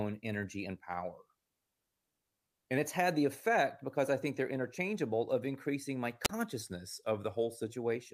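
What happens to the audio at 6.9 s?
Right around there, just after "interchangeable of increasing my", the speech sags: from 6.62 s to 7.67 s it plays about 6% slow and drops roughly 110 cents, a bit over a semitone, then returns to normal. That's a drift correction step. Clock-matching software likely stretched the playback rate in one jump to rebalance its buffer, so speed and pitch fell together and then recovered.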